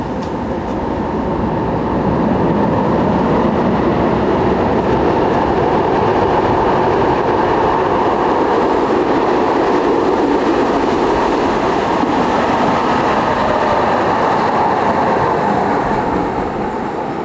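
Input gain set far too high, likely with a fast limiter clamping every loud event, causes gain pumping across this recording of sounds: the gain ducks by around 10 dB under each loud sound, leaving everything squashed, within call-style microphone processing that stops at 8 kHz.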